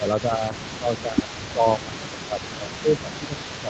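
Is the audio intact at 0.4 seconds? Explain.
No. From 0.22 to 0.49 s the speech dips by around 10 dB in pieces totalling about 150 ms. This is speech suppressed in double talk, likely an echo canceller turning down the near talker while the far side also speaks.

A delayed copy of the speech runs under it throughout, from 0.03 s to the end, about 15 dB down and trailing by roughly 0.33 s. This is an echo leak, likely a loudspeaker echo the canceller failed to remove and sent back.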